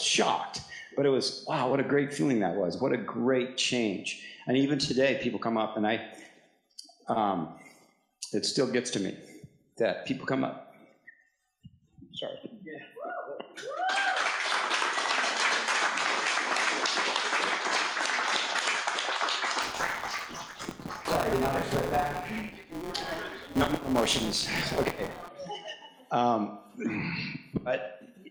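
From 19.62 to 25.29 s there's buffer tearing: writer and hardware read pointer have slipped, so a small slice of each period replays stale audio from a lap back. The hard joins give a rattly 172 Hz buzz, which fits a 256-sample buffer.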